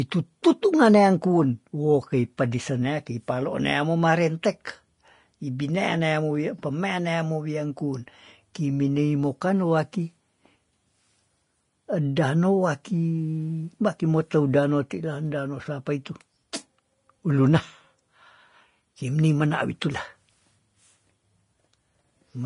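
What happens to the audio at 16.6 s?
At 16.6 s, as throughout the speech, likely low-bitrate Vorbis compression (around 32 kbps) cuts everything above 10.6 kHz and coarsely quantises the treble, leaving plainly hissy, grainy sound.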